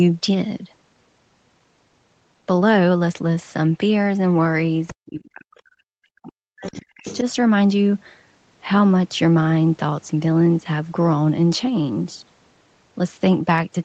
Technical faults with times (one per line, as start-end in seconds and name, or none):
4.87-4.93 other side's voice leaking through
4.91-6.76 speech suppressed in double talk
5.23-5.30 other side's voice leaking through
6.64-7.23 other side's voice leaking through
7.21-7.26 speech suppressed in double talk